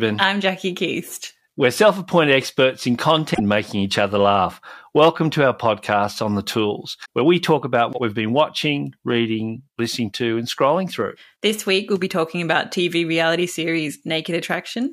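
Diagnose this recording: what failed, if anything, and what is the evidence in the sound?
Damaged data in the compressed stream, so it's a codec-stage fault. There's a glitch from 3.31 to 3.40 s after "self appointed experts in" and a blip from 7.02 to 7.07 s after "podcast on the tools". Corrupt frames threw the decoder out of sync until it found the next header.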